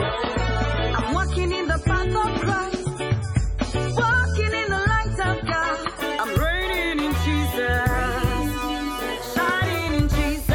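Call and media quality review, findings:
Adaptive stream starting at a low bitrate, 0.0 to 6.0 s. Dull, smeared audio with nothing above 10.5 kHz and stronger codec artefacts. Player started on a low rendition for fast startup. The sound fits a 24 kbit/s MP3. At 6.0 s the quality steps up abruptly without a gap, consistent with a switch to a 128 kbit/s MP3 rendition once throughput was measured. Component: player ABR logic.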